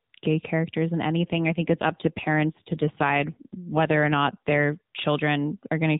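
From 1.19 to 4.79 s an AMR rate drop makes the speech rougher and more synthetic, consistent with a switch from 12.2 to 5.9 kbps. Unlike packet loss, there is no gap and the band stays the same.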